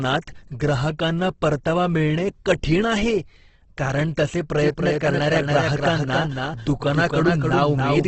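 From the start, the speech carries heavy Opus compression, likely from a low-rate encoder in its music mode: tones sound grainy and rough. A spectrogram shows nothing above 8.2 kHz, with noisy smeared bands below, which points to a bitrate near 12 kbps.

At 4.59 s a doubled audio track begins and lasts to the end, likely from a second, slower capture path: a dry copy a few decibels quieter trails about a third of a second behind. The waveform shows repeated, offset envelopes with no decaying tail.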